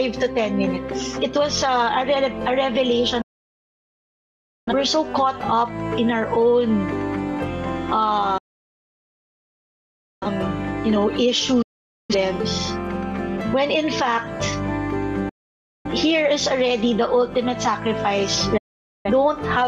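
Digital broadcast dropouts mute the sound at 3.21–4.73 s, 8.38–10.27 s, 11.62–12.15 s, 15.29–15.89 s and 18.57–19.10 s. The receiver lost valid frames and muted. Each hole begins with an 8 ms fade to silence. The programme carried on during each gap, so that audio is lost.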